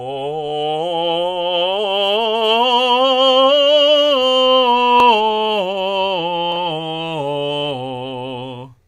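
No technical faults can be heard anywhere in this music.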